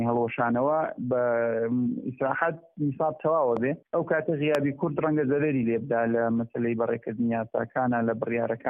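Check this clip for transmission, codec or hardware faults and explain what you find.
Two loud pops, at 3.57–3.59 s and 4.55–4.57 s, stand sharply above the sound, the second stronger at roughly 15 dB over the signal against about 10 dB; likely a brief voltage spike from a switch, static or driver glitch.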